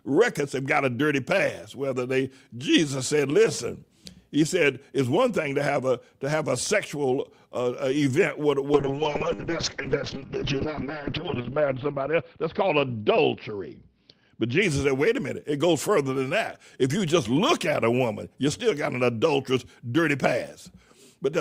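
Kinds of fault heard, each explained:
Call bitrate drop: from 8.74 to 14.68 s the encoder runs short of bits, and the sound turns coarse and muffled, consistent with a fall from about 64 kbps to 7 kbps. A spectrogram shows the top edge cut from 20 kHz to 6 kHz, worst for about 1.1 s.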